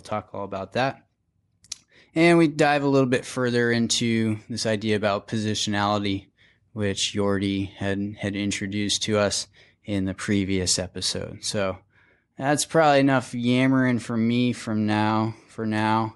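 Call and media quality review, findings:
Likely Bluetooth LC3 compression on the link, whole clip: plainly audible codec damage on the speech throughout, consistent with a 48 kbps stream in 7.5 ms frames.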